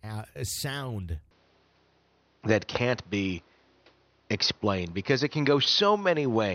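At 1.31 s, right after "a sound", the input likely switched to a poorer device. From there to the end nothing passes above 6.2 kHz, so the speech turns duller, shifts modestly in level and gains a faint new noise floor, with no gap at the switch.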